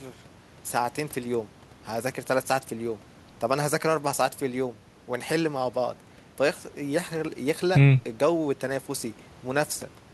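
Nothing in the recording stands out as a technical fault, so there's nothing to flag anywhere along the way.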